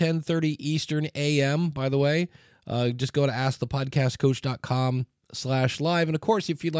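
Nothing in the speech stood out as a technical fault on listening.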